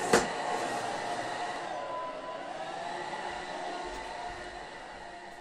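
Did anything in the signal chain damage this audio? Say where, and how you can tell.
Yes. There is an abrupt jump in the sound at 1.56 s and 3.42 s. These are likely dropped buffers (overruns) at the driver or buffer stage, where unread samples were overwritten, losing roughly 70 ms and 20 ms. The waveform splices directly with no gap.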